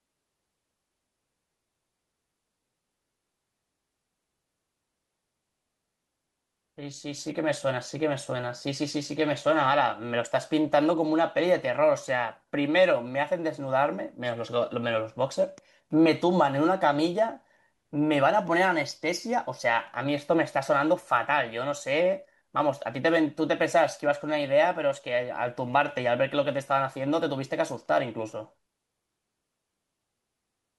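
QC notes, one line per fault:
No faults found in this clip.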